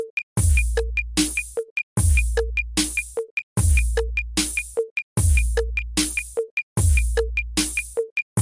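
Nothing goes wrong anywhere in this clip, so there's no technical fault to point out.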